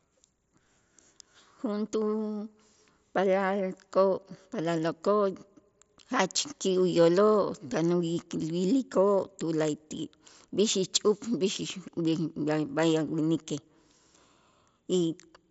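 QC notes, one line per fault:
Nothing stood out on listening; the speech arrives over a Bluetooth mSBC headset link, with its top end stopping near 7.7 kHz as expected for that path.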